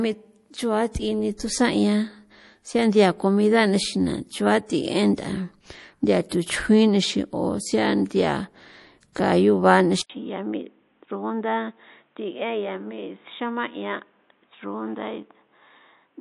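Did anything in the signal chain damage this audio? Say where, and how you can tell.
Yes. Throughout, the sound has plainly audible codec damage and nothing above 11.5 kHz, which points to MP3 compression at the codec stage, likely at a low bitrate around 48 kbps.

At 1.37–1.40 s, just before "tusan 'ian", and again at 6.29–6.32 s, a 24 ms hiss precedes the attack. This is pre-echo: the codec spreads a block's quantisation noise ahead of a late transient.

At 10.0 s, after an 80 ms silence, the sound turns dull, with nothing above 3.8 kHz. It is about 5 dB quieter, with new noise roughly 40 dB down to the end. The likely cause is the input being switched to a poorer device.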